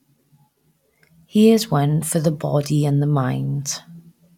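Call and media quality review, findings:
No faults found in the speech recording. Nothing to escalate or flag for follow-up.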